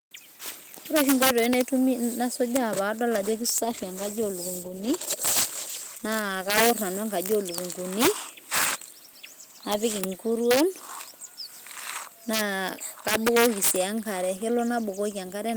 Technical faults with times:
0.00-15.57 integer overflow
3.19-6.61 call bitrate drop

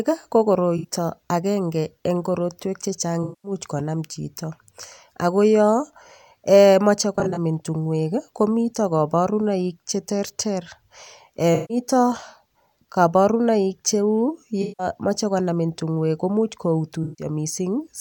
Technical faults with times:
0.77-0.87 AAC frame loss with concealment
3.23-3.52 AAC frame loss with concealment
7.16-7.38 AAC frame loss with concealment
11.54-11.77 AAC frame loss with concealment
14.62-14.87 AAC frame loss with concealment
17.03-17.25 AAC frame loss with concealment

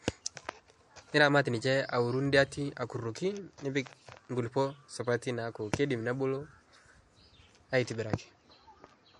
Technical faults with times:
0.00-9.20 MP3 compression

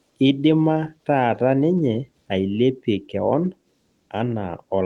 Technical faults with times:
none

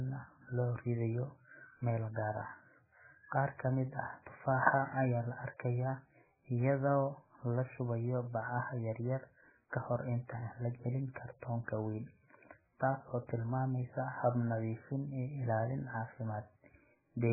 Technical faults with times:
0.00-17.33 MP3 compression

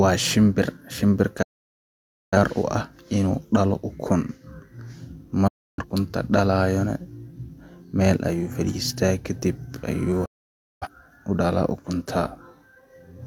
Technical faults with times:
1.42-2.38 digital broadcast dropout
5.47-5.84 digital broadcast dropout
10.25-10.88 digital broadcast dropout

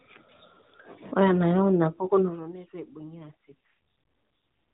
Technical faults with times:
3.18-3.66 AMR rate drop

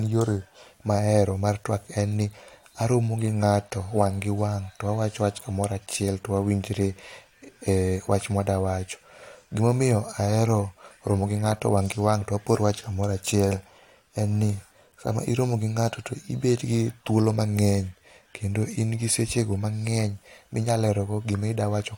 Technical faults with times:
none

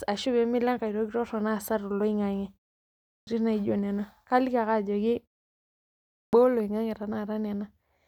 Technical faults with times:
3.10-3.27 clipped start after a pause
6.18-6.33 clipped start after a pause

